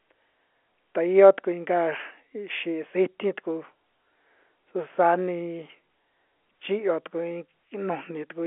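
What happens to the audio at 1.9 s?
Nothing goes wrong at 1.9 s: the speech there comes through intact, carried on a telephone-band G.711 line, with nothing above about 3.7 kHz.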